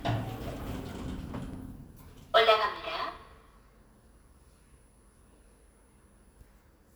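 Sharp single clicks at 0.45, 1.54, 2.76, 4.29 and 5.42 s are likely dropped samples, where well under a millisecond of the stream goes missing and the waveform jumps. Unlike a dropout, no sound is lost, only an instantaneous tick with a thin vertical spectral line.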